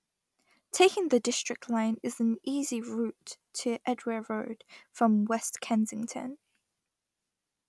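No technical faults are audible.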